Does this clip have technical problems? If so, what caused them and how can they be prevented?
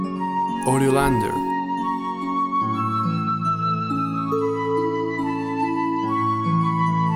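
No, no technical fault can be heard in this clip. With nothing to trace back to a cause, there is nothing here that calls for prevention.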